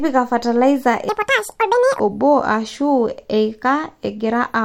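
A short piece of speech with one obvious problem: a section at the wrong speed, running from 1.09 s to 1.99 s. For that stretch the audio plays back at about 1.88 times its proper rate, so it suddenly sounds rushed and chipmunky, jumping up in pitch by roughly ten semitones, close to an octave, before snapping back to normal. It's likely an editing or playback step that put that segment on the wrong clock.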